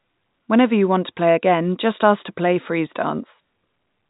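No faults are audible in the speech; it sits in the ordinary G.711 telephone band, with nothing above roughly 3.8 kHz, as that format always gives.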